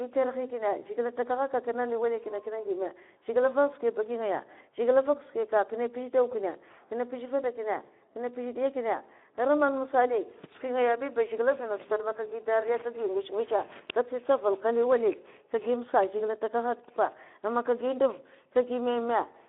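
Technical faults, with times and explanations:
Throughout, Speex codec: speech is confined to 200 Hz to 3.6 kHz, and CELP coding at about 11 kbps starves the excitation, leaving it audibly noisy and hoarse.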